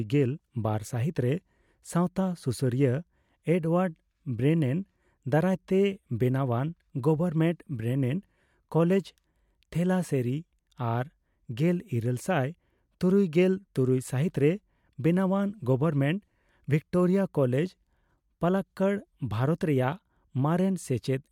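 Nothing goes wrong anywhere in this recording: the speech carries on without any dropout, glitch or other technical fault to point to.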